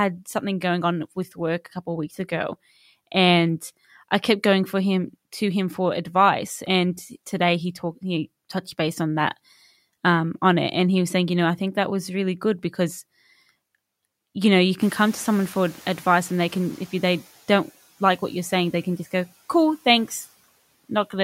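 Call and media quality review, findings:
Noise suppressor catching up, 14.8–17.2 s, after "you know you", settling by "don't like what you're". Room noise jumps roughly 20 dB near 15 s. Suppressor's noise estimate lags, passing the rise, then adapts over 2.43 s, cutting about 8 dB. Spectrogram: broadband floor steps up, then fades to a lower band under speech. Waveform: thickened baseline between words, thinning over the span.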